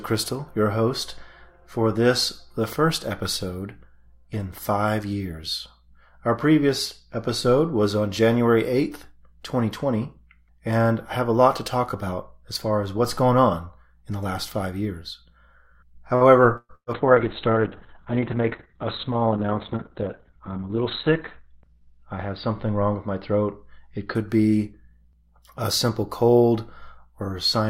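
At 16.15 s a packet arrives late and the jitter buffer runs dry, producing a short stall from a late packet. The receiver holds the last sound for about 56 ms until the packet shows up, then carries on from the same point. Nothing is lost, but the sound hangs slightly too long with a faint buzzy smear, and everything after it now runs 56 ms later than before.

Two bursts of packet loss follow, from 16.57 to 16.72 s and from 16.75 to 16.90 s. Each time about 120 ms of audio never arrives in time to play. The receiver extends the last sound for roughly 119 ms while fading it down, and at the end of each burst the output drops to silence, for about 40 ms in the first burst and 70 ms in the second. The audio then resumes further along with the missing stretch skipped, so the two gaps come in quick succession as a stuttering dropout.

From 16.94 s a call bitrate drop begins. The bandwidth estimate collapses, and the encoder falls from 64 to 6 kbps and stays at that lowest rate for about 4 s. 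At that rate the codec quantises coarsely and narrows the audio band from 20 kHz to 4 kHz. The sound turns muffled and rough, with a watery texture and no top end, until the rate recovers at 24.21 s.

Inside that degraded stretch, from 18.25 to 18.51 s, comes a jitter buffer speed-up. The buffer is holding more audio than it targets. To shed the excess the receiver cuts out short pitch-period pieces in quick succession, about 40 ms in total. Playback runs at about 111% speed without changing pitch, so this quarter-second sounds briefly hurried.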